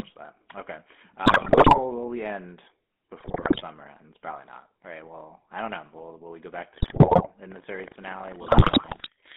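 Throughout, the GSM full-rate codec is plainly audible: buzzy, gravelly speech in a 200 Hz to 3.5 kHz band, which fits the 13 kbps pulse-excited coder. GSM bit errors at 1.26–1.79 s, 3.2–3.63 s, 6.74–7.27 s and 8.46–9.08 s corrupt the decoder's filter, pitch and gain values, producing squawks, pops and gargling.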